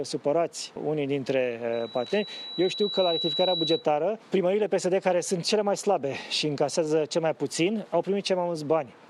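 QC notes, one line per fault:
1.73–3.87 s, loudspeaker feedback squeal: a 3.9 kHz tone swells over about a second and a half to roughly signal level. The microphone is re-amplifying its own loudspeaker there.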